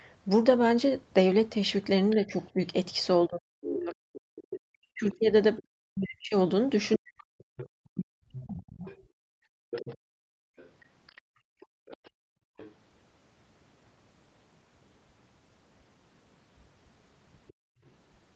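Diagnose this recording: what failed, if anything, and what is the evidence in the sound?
Call processing, likely an echo canceller leaving residue: other side's voice leaking through at 2.10–2.14, 3.63–5.63, 6.92–7.69, 8.86–12.74 and 17.48–17.90 s, faint to fairly prominent.

Call processing, likely the echo canceller mistaking double talk for echo: speech suppressed in double talk between 2.15 and 8.87 s, dipping by up to roughly 40 dB for about 3 s in total.

Call processing: background gated by the echo canceller while the loudspeaker played, so the room sound drops by about 31 dB at 9.15–12.57 s and 17.53–17.83 s.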